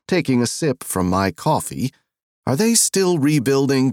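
From 0.75 s to the end, pre-emphasis is left on: the treble boost matching a 75 µs FM curve was applied but never undone by the corresponding de-emphasis. Highs sit about 13 dB above the 1 kHz level by 10 kHz, so the audio turns thin, glassy and hissy, with sibilant edges. On a spectrogram, everything above a few kHz brightens abruptly at 0.75 s; the waveform gains spikier, denser fine detail.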